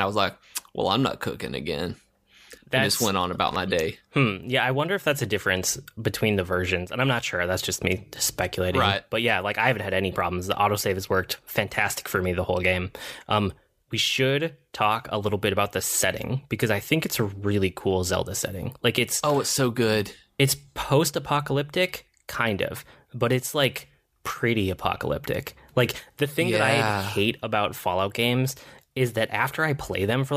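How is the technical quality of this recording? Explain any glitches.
There is one glitch in this speech recording. Loose connector crackle runs from 3.48 to 3.56 s, between "I just went on" and "my hmm day". A worn contact making and breaking chops the signal into an irregular scratchy burst.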